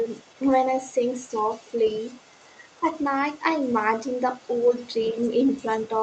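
Right from the start, at 0.03 s through 0.68 s and again from 0.92 s to the very end, you can hear the other side's voice leaking through underneath the talker. It's faint, sitting roughly 30 dB below the main speech, but it's there almost the whole time. The likely story is that the far end is playing out of a loudspeaker and the echo canceller isn't scrubbing all of it from the mic, so a quiet second voice rides along behind.

Twice there's speech suppressed in double talk: a short dip of a few dB from 2.81 to 2.86 s, and a deeper one, around 10 dB, from 5.11 to 5.16 s. Each lasts only about 50 ms, so it comes across as a quick duck or clipped moment in the talker's level rather than a full dropout. Most likely the canceller hit both sides talking at once, couldn't tell its own talker from the echo, and pulled everything down for an instant.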